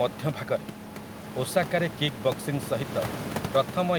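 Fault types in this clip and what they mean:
No faults are present in this speech clip.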